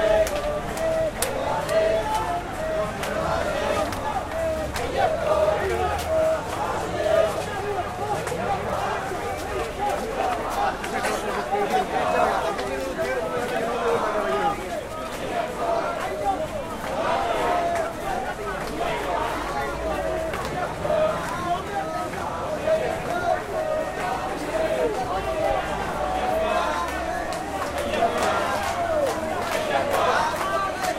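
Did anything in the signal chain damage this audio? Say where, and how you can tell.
No, nothing in the signal chain has audibly damaged this recording of sounds, and no stage from capture to playback has left a trace that can be heard.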